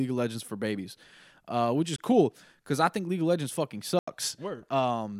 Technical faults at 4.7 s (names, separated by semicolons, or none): none